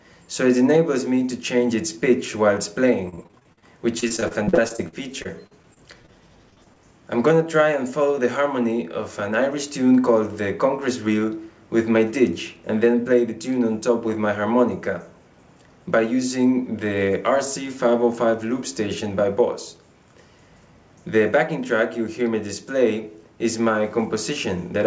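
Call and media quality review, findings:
Repeated packet loss (robotic sound): choppy bursts at 3.06–3.64 s, 4.00–6.17 s and 6.50–6.78 s. Receiver concealment keeps stretching the last sound over gaps of up to about 40 ms. Unlike a single dropout, the holes recur within a fraction of a second.

Jitter buffer speed-up: 13.89–14.27 s, audio hurried to 107% speed at unchanged pitch. The receiver trims short pitch-period slices, around 40 ms in total, to drain excess buffering. Unlike packet loss, nothing sounds missing or metallic. It is only rushed. The 64 kbps G.722 call path has no content above 8 kHz.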